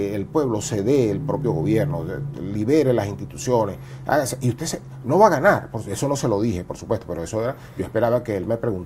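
No technical faults can be heard anywhere in this audio. Nothing in it stands out as a problem at any point.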